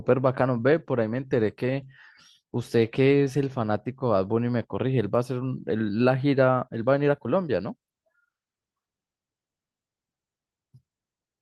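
No technical faults turn up anywhere in the speech, so there is nothing to report.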